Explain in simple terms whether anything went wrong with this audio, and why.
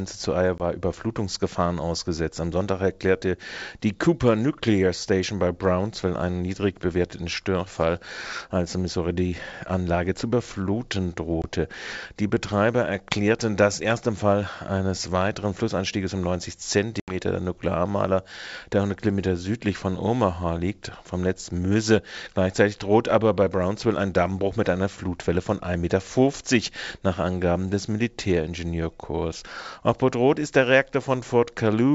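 Packet loss on an ADPCM call: short silent holes at 0.58, 11.42 (right after "zu überfluten") and 17.0–17.16 s, then the speech returns slightly off, since the decoder briefly loses track.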